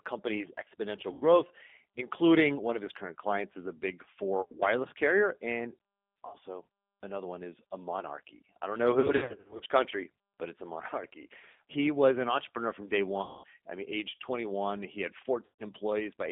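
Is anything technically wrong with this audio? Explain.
Yes. Throughout, the speech has plainly audible damage from a G.729 codec at 8 kbit/s. Its model-based coding sounds rough and synthetic, and a spectrogram shows energy confined to 200 Hz to 3.6 kHz.

Packet loss concealed by the speech codec occurs at 1.13–1.25, 4.41–4.63, 6.27–6.36, 9.00–9.61, 13.22–13.44 and 15.45–15.65 s. The decoder extrapolates its last pitch and filter into a fading buzzy tone or coloured noise. On a spectrogram this appears as smeared harmonics and sagging waveform envelopes.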